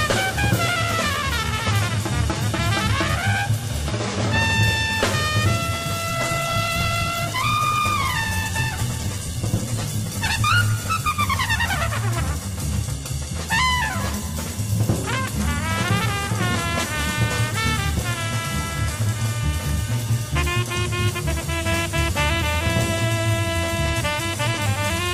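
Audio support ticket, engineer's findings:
Call bitrate drop, 6.08–13.09 s. Audio turns coarse and muffled, top end cut, worst for about 3.9 s. Encoder starved by a fallen bandwidth estimate; sound fits a fall from about 64 kbps to near 12 kbps, then recovery.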